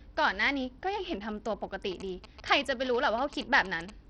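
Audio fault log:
throughout: Bluetooth SBC compression, likely. The treble is missing or flickering and gritty quantisation noise rides on the speech, pointing to a starved bit pool near 64 kbps. On a spectrogram the upper sub-bands show as ragged, blotchy patches that switch on and off.
1.92–3.90 s: GSM signalling bursts. A galloping pattern of short buzzes at 217 Hz repetition sits roughly 15 dB under the speech, from a nearby phone's radio bursts rectified by the circuitry. The waveform shows spiky pulse trains, and the spectrogram shows evenly spaced vertical striations.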